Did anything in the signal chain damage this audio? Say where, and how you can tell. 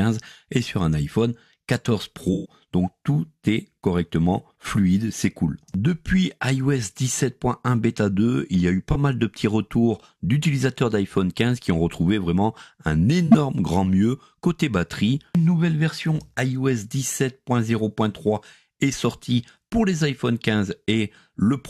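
Yes. The damage happened at the codec stage, as a corrupt frame concealed by the AAC decoder. Concealed frames fall at 2.33–2.53 s, 8.92–8.96 s and 13.27–13.35 s. Each lasts only as long as a few damaged frames. The decoder detected flipped bits and either muted those frames or filled them with a scrambled copy of the last good spectrum. A spectrogram shows short vertical gaps or smeared bands, and the waveform dips.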